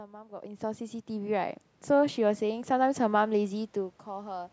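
Automatic gain rising from 0.29 to 2.98 s: the gain control judged the input too quiet and lifted it about 10 dB, so voice and background swell together.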